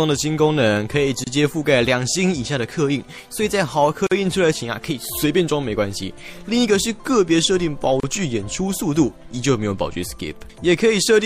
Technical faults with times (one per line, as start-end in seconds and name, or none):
0.00-11.25 MP3 compression
1.24-1.27 gap at a join of encoded pieces
4.07-4.11 gap at a join of encoded pieces
8.00-8.03 gap at a join of encoded pieces